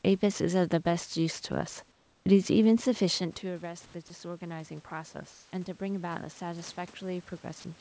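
From 1.92 to 2.26 s the room background, sitting about 39 dB below the loudest speech, turns flat and featureless for 340 ms. This is comfort noise in place of the background, likely because the sender stopped transmitting during the pause and the receiver synthesised matching noise. On a spectrogram the band up to 8 kHz loses its fine grain and becomes a smooth, even wash, only about 1 dB different in level.

Shortly after the talker eases back from the microphone around 3 s, automatic gain rising begins at 3.42 s and runs to the end. The input fell by about 14 dB, so the gain control slowly lifts speech and room noise together. The waveform envelope and the noise floor between phrases climb steadily over several seconds.

The same smooth synthetic background returns briefly from 3.86 to 3.94 s (80 ms) and from 5.32 to 5.52 s (200 ms), with no level step. Each shows as a short uniform patch in the spectrogram where the real background's texture disappears.

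At 7.60 to 7.64 s there is sound dropped by the voice detector, likely because quiet trailing speech was judged to be background. About 30 ms of sound is lost to 40 ms of comfort noise. On the waveform the tail is clipped short into a low, even noise band.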